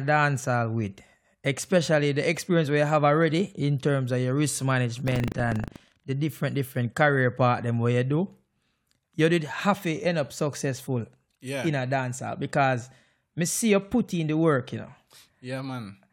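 From 5.04 to 6.04 s, between "terms of your risk" and "the different different career", buffer tearing adds a steady robotic rattle at 25 Hz. In each period a small slice repeats audio from about a tenth of a second earlier, with hard joins on both sides. Unlike dropouts, nothing goes silent, and the buzz follows the speech.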